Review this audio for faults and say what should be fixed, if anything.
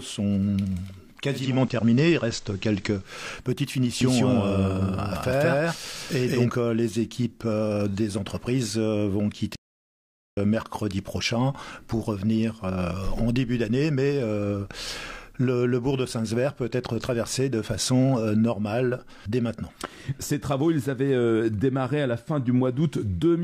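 The hybrid receiver lost its digital signal and blended to the station's FM broadcast between 1.28 and 3.23 s. Over a 341 ms cross-fade, the level shifts by about 2 dB, and a faint hiss appears. Improving reception or fixing the receiver to digital-only would prevent the digital radio blending to analogue.

The audio was likely captured a second time through a slower path, creating a doubled audio track from 4.01 to 6.49 s. A dry, full-band copy at roughly equal level trails by about a fifth of a second, then starts and stops abruptly. Removing the duplicate route would prevent it.

From 9.56 to 10.37 s, the player ran out of data or was blocked, and the output went silent for 814 ms mid-flow. This playback stall likely comes from an underrun. A larger playback buffer or higher thread priority would help prevent it.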